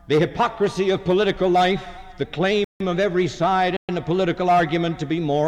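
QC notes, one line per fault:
2.64 to 2.80 s, rebuffering stall: the sound drops to silence for about 160 ms and then picks up exactly where it stopped, nothing skipped, only time added while the player waited for more downloaded audio. The waveform shows a flat gap; the spectrogram shows a clean vertical blank band.
3.77 to 3.89 s, playback stall: output goes silent mid-flow for 120 ms before continuing, likely from the player running dry or its output thread being blocked. On the waveform it appears as a short flatline; on the spectrogram, a narrow empty column across all frequencies.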